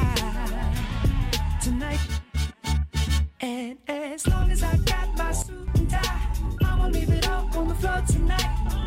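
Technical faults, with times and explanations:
5.42–5.68 s, sudden gain jump: the sound and its background noise drop together by about 12 dB in an instant, then snap back at 5.68 s, with no fade. This is likely a digital gain change applied from one sample to the next without a ramp.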